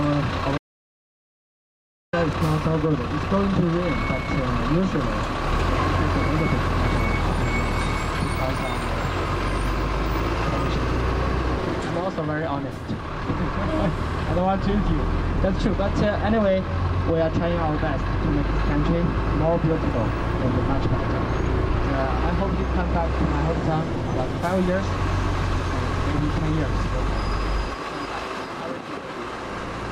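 An audio dropout to silence runs from 0.58 s to 2.13 s, about 1.55 s of silence with no room tone, and the sound resumes mid-flow. This is likely a lost input, such as a disconnected device, failed link or stray mute, while recording continued.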